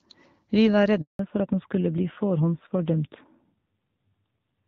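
At 1.01 s the speech cuts out in a handover gap lasting 180 ms, until 1.19 s. The call was switching networks and no speech frames arrived, so the sound fades within a few tens of milliseconds into true silence. Unlike a burst of packet loss, there is no concealment buzz or repeated fragment.

From 1.19 s to the end, the call falls back to narrowband. Everything above 4 kHz disappears at once and stays gone, and the speech turns duller and rougher, which fits a low-rate AMR-NB mode. Before the gap, the light, clear HD Voice sound fits AMR-WB at about 12.65 kbit/s. A low-pass filter would roll off gradually, but here the cut is a permanent switch in codec character.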